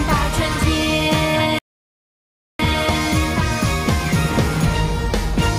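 A short piece of audio with a playback stall: at 1.59 s the sound cuts out mid-flow and stays silent for about a second, picking up again at 2.59 s. That's most likely the player running dry of buffered data or its thread getting blocked.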